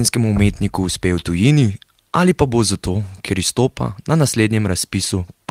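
No technical faults are audible.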